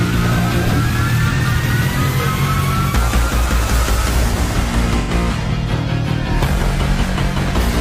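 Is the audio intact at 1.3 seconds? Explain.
No: AAC frame loss with concealment from 1.33 to 1.40 s. The decoder rebuilds about 43 ms, which fits one lost frame, from the previous spectrum, giving a smeared, phasey patch rather than a silent gap.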